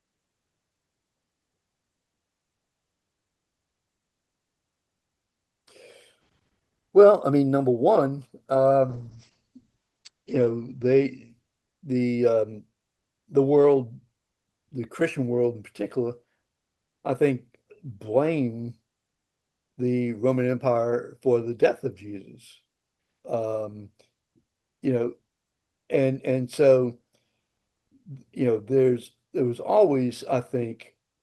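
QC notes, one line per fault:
8.91–12.05 s, call bitrate drop: the sound gets rough and watery here and loses its top end, with the highs cut off around 8 kHz instead of reaching up near 20 kHz. That's what happens when the call's bandwidth estimate falls and Opus gets squeezed into coding much more coarsely. It fits a drop from roughly 32 kbps to 9 kbps, and it sits at its worst for about 1.3 s before recovering.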